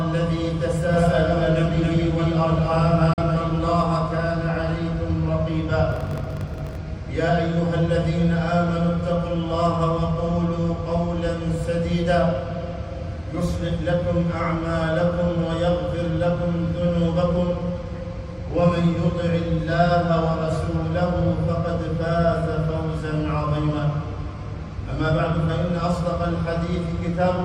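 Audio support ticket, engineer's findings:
Doubled audio track, 0.94 to 3.82 s. Full-band copy trailing roughly 0.3 s behind at about equal level, no decay or room colour, abrupt start and stop. Likely a second capture via a slower path, mixed back in.

Digital broadcast dropout, 3.13 to 3.23 s, inside the doubled section. Sound fades out in about 3 ms, then a hole of about 43 ms before it returns. Receiver muted on a bad or missing frame. The gap fits one lost frame.

Block size mismatch (padded), 5.90 to 6.76 s. Buzz at 46.9 Hz, playback running at 0.938× speed with pitch near normal. Upstream writes short blocks and the remainder is zero-filled, consistent with a 1024-sample read block.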